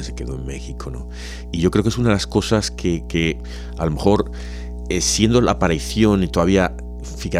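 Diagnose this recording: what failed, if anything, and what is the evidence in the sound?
A steady low drone sits under the speech for the whole clip, a 60 Hz tone with a few low harmonics riding on top, and it is loud, only about 10 dB below the speech itself, so it fills every pause. This is mains hum, a failure in the analogue wiring stage: a ground loop or a nearby transformer has coupled the 60 Hz power line into the signal path before conversion, and nothing downstream removed it.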